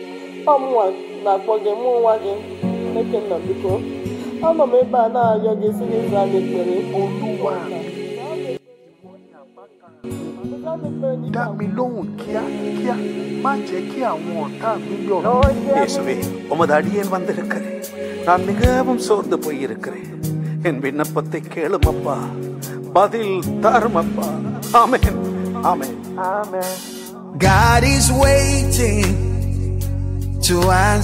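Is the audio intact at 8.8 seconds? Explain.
No. From 8.57 to 10.04 s the audio drops by about 24 dB and turns faint. This points to one channel inverted: one stereo channel has likely flipped polarity, so when the two are summed to mono, everything they share cancels. Centred content and low end largely disappear, leaving only the difference between the channels. At 8.8 s the sound is this faint residue rather than the full signal.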